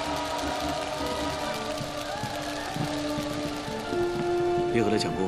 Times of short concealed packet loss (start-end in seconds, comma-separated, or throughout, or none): none